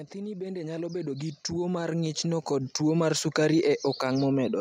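From 0.12 s to 3.3 s the level climbs steadily as automatic gain rising sets in: the gain control judged the incoming speech too quiet and pushed its gain up by about 15 dB over roughly three seconds. Because the stage amplifies everything it receives, the speech and the background noise swell together rather than the speech alone getting louder, so the room tone grows audibly underneath as the level rises.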